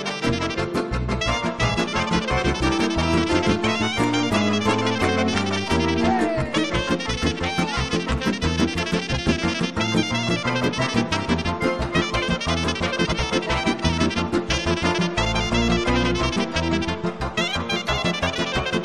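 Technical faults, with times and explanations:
13.04–13.20 s, frames out of order: two adjacent blocks of about 70 ms play swapped, giving a garbled flutter; unlike a dropout, no time goes missing.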